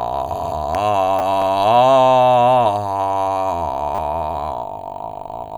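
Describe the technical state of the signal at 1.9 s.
At 1.9 s the music plays through cleanly, with no dropout, distortion, glitch or other audible fault in the signal at that point.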